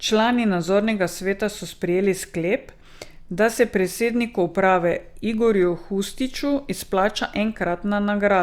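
No technical faults can be heard anywhere in the recording.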